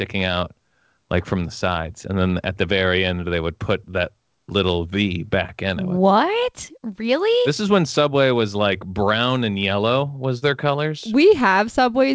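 No technical faults can be heard in this speech recording: it carries the steady coding character of a wideband call path with nothing above 8 kHz, which fits G.722 at 64 kbps.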